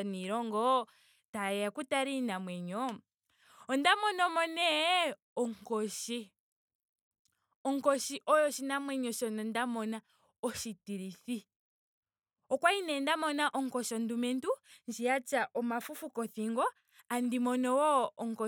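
No technical faults can be heard at any point in the recording.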